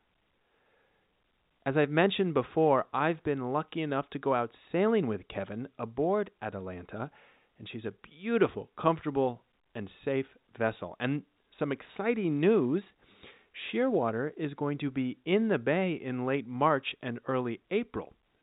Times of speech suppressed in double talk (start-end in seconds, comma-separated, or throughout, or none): none